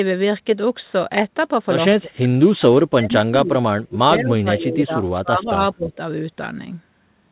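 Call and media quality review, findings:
Speech suppressed in double talk, 1.98–2.34 s, 2.56–5.04 s, 5.22–5.98 s: level ducks about 35 dB (about 20 dB last), likely echo canceller over-suppressing during double talk. Dips within a 4 kHz G.711 band.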